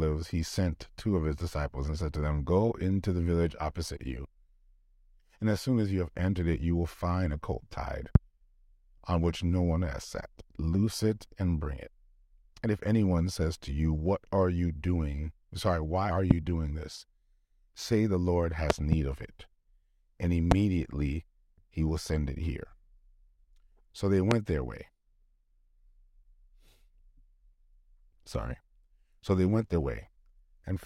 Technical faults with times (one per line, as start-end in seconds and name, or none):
8.15-8.18 loud pop
16.31-16.33 loud pop
18.70-18.95 loud pop
20.51-20.54 loud pop
24.31-24.34 loud pop